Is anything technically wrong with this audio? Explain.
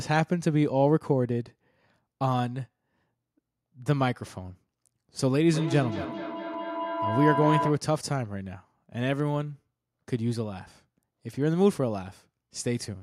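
Yes, there's a feedback howl from 5.53 to 7.90 s: a shared-room mic-to-speaker loop gaining level each trip, building a tone around 1 kHz, repeating every fifth of a second, about 3 dB under the speech.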